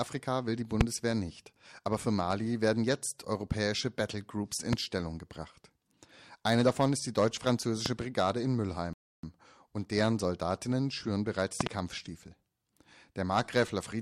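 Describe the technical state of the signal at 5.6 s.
At 5.6 s the signal is intact, with no audible fault at that moment.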